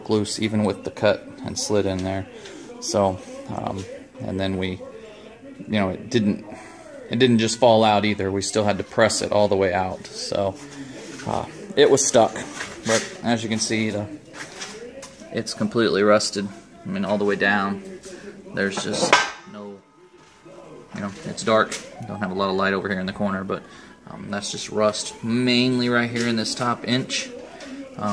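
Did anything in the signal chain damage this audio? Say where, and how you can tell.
No, nothing in the chain audibly damaged this audio; no stage shows a fault that can be heard.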